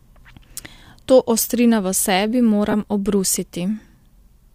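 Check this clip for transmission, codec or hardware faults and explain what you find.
There's one real fault: a short dropout in the speech from about 2.71 to 2.74 s.

That's lost LE Audio frames. Roughly 22.5 ms of the Bluetooth LE Audio stream went missing, which fits three LC3 frames of 7.5 ms each. The LC3 decoder covers the gap by replaying the last good spectrum with randomised signs. The loss is short, so it doesn't get far into fading out. You hear a brief noisy smear where the tonal detail of the speech turns briefly hissy before clean audio resumes. The light lossy compression is at most faintly audible.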